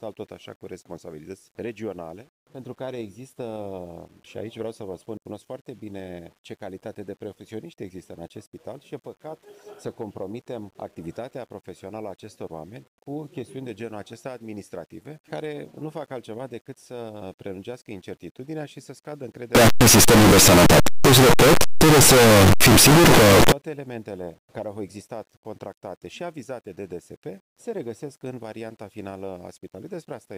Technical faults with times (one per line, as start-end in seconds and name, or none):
19.55-23.52 signed and unsigned mixed up